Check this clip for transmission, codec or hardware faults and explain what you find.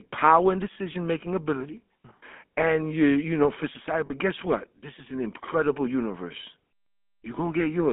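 Two faults are audible: GSM full-rate coding throughout, and two brief lost-frame repairs.

GSM full-rate codec, throughout. Sound is squeezed into 200 Hz to 3.5 kHz and modelled crudely, fitting 13 kbps. It sounds buzzy and gravelly.

Lost GSM frames, at 0.74 to 0.77 s, between "power and" and "making ability", and at 4.06 to 4.13 s, between "you know for society" and "guess what". The previous good frame is held in place of the missing ones. It rings roughly and metallically. The lengths fit one and two lost 20 ms frames.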